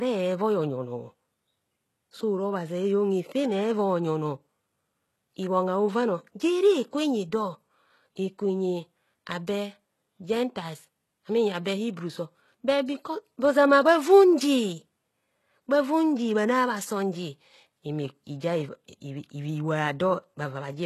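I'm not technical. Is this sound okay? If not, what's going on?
No. The likely cause is HE-AAC compression, which fakes the treble by copying lower sounds upward. Throughout the speech, s sounds come out gritty and metallic, with nothing above 12.3 kHz.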